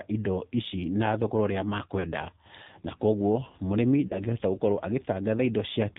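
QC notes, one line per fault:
Throughout: AMR narrowband mobile codec. The speech passed through the 2G/3G AMR-NB codec at 8 kHz sampling, so nothing above 4 kHz survives, and the top of the sound is cut away. The codec rebuilds the voice from a vocal-tract model excited by a few pulses per subframe, and the damage is plainly audible: a buzzy, synthetic edge that fits a low mode around 7.4 kbps.
1.99–2.06 s and 4.08–4.17 s: lost AMR speech frames. Radio errors corrupted speech frames, so they failed their checksum and the decoder filled the gap by repeating the last good pitch and vocal-tract settings at reduced gain. The first gap, about 40 ms, points to two consecutive lost frames. The second, about 20 ms, fits a single frame. The single lost frame is heard as a brief dip or warble, and each gap is followed by a moment of weak, rough voice as decoding recovers.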